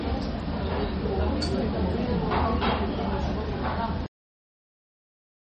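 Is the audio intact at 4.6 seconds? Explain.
No. At 4.6 seconds there is only digital silence. A cut-off end begins at 4.06 s and runs to 5.41 s. The last stretch of audio was never written or played out. The sound stops mid-event and drops straight to silence, with no decay.

Before the cut, the sound is watery and swirly, with smeared attacks and nothing above 8.4 kHz. The likely cause is heavy MP3 compression, which fits a low bitrate near 32 kbps. Starved of bits, the encoder removes the treble and lets weak detail flicker between frames.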